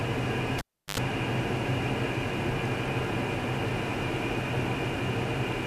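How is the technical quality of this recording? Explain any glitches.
One fault affects the recording. From 0.58 to 0.98 s, a cable is pulled and plugged in. A pop cuts the sound for about 350 ms. Then 78 ms of 50 Hz mains buzz comes through the half-seated plug before a second pop restores the sound.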